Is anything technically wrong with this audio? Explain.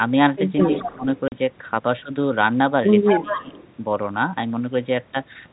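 Yes, there are three kinds of fault in this speech.

An echo leak is heard at 0.59 to 0.96 s and again at 3.05 to 3.68 s. A delayed copy of speech trails by 216 ms, about 15 dB and then about 10 dB below the talker. It is likely a loudspeaker echo the far end's canceller failed to remove. On a spectrogram it appears as a weaker, shifted duplicate of the harmonic pattern.

Speech suppressed in double talk overlaps those stretches at 0.65 to 1.05 s and 3.09 to 3.52 s. The talker's level sags by up to about 20 dB and then about 15 dB, for roughly 300 ms and then 400 ms. The echo canceller likely ducked everything while both sides spoke. The waveform envelope visibly caves in there.

Packet loss filled with silence cuts a 40 ms hole at 1.28 to 1.32 s, which fits two 20 ms packets. It shows as a silent gap with hard edges, and as a blank vertical stripe on the spectrogram.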